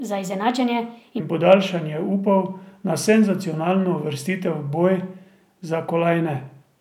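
Until 1.2 s, just before "in podaljšanje", speech sounds hurried and about four semitones high: a section at the wrong speed, likely running 1.28 times fast.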